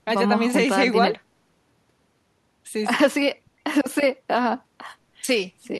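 Listening to this speech recording, nothing stood out as a technical problem.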